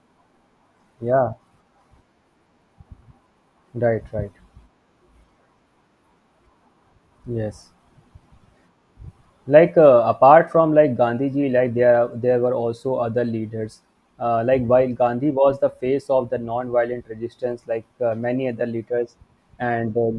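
There are no technical faults in this speech recording, so there is nothing to describe in time order.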